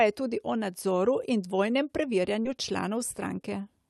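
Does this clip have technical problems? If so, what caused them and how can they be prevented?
Yes, there's one: a short concealed packet loss from about 2.41 to 2.47 s, right after "o nadzoru in dvojnem". Roughly 40 ms of audio didn't arrive in time, and the receiver covered most of the gap by carrying the last bit of sound forward before fading back into the real signal, so you get a quick smear or wobble there. The call codec also cuts off the top end above roughly 12 kHz. To prevent the dropout, use a steadier network link or a slightly deeper jitter buffer.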